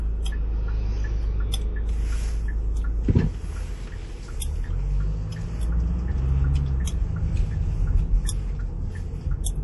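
From start to finish the sound carries plainly audible damage, likely from MP3 compression at a low bitrate, fitting roughly 48 kbps. Nothing survives above 11.5 kHz, so a spectrogram shows a hard ceiling there, with flickering holes beneath where weak lines drop out, heard as watery swirling and smeared attacks.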